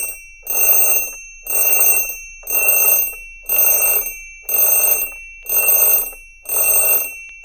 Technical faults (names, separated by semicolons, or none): clock drift buffer slips